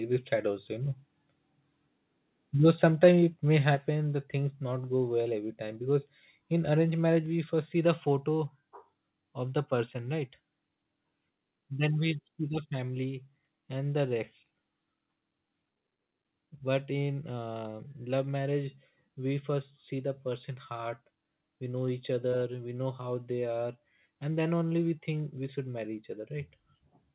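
From 3.03 to 3.09 s the loudest speech turns harsh and crackly, its peaks flattened about 3 dB past the limit, likely from microphone overload. Voice and background then fall abruptly, by about 5 dB at 3.75 s and about 2 dB more at 7.26 s. This is the microphone volume stepped down, likely by the call software reacting to the clipping.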